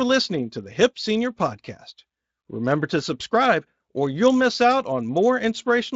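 No faults found in the speech; the Speex coding leaves only its mild, characteristic colouring.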